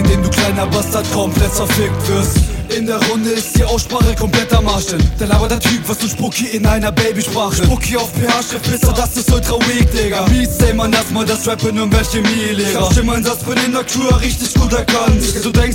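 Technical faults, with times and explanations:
No technical fault can be heard anywhere in this clip. There is nothing to list with a time or an explanation.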